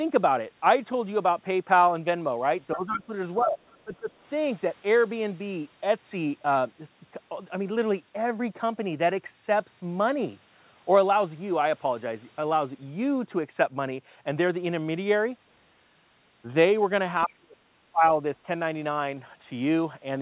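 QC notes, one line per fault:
2.75–3.13 s, 3.37–3.59 s, 3.84–4.11 s and 17.26–18.03 s, speech suppressed in double talk: the voice dips by roughly 10 to 30 dB in short bursts, worst in the last one, likely because the echo canceller turned it down while the far side spoke. The waveform pinches inward, and the spectrogram shows gaps and thinned upper harmonics.
2.91–3.00 s, 3.38–3.45 s and 17.28–17.36 s, other side's voice leaking through: brief, faint scraps of a second voice, the first about 10 dB under the talker and the others much quieter, likely far-end residue the echo canceller missed. The spectrogram shows stray harmonic fragments overlapping the suppression dips.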